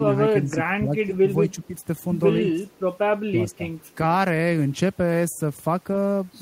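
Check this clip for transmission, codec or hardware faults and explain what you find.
The clip shows two related echo-control faults in the first 3.6 seconds of speech.

Speech suppressed in double talk occurs at 0.0–0.18, 0.42–0.57, 0.8–1.28, 1.5–1.73, 2.4–2.7, 3.29–3.4 and 3.57–3.61 s. The voice dips by roughly 5 to 15 dB, deepest in the 2.4–2.7 s stretch. This is likely an echo canceller unable to separate its own talker from overlapping loudspeaker echo and attenuating both.

Echo leak occurs at 2.68–2.8 s, where a faint delayed copy of the voice trails about 170 ms behind, around 35 dB below the speech. This is likely residual loudspeaker pickup that the far-end canceller failed to subtract and sent back.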